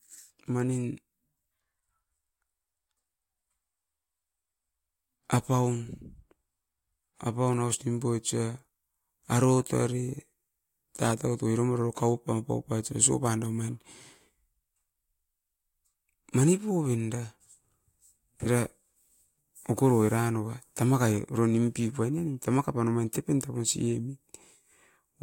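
A speech recording with no audible technical fault anywhere in it. There is nothing here that needs a time or a cause.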